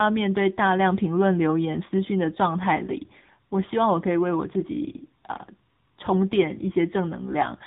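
Throughout, tandem speech coding: CVSD, then AMR-NB at 7.95 kbit/s, the second recoding the first's damage. The speech is rougher and warblier than one codec would leave it, with nothing above 3.8 kHz.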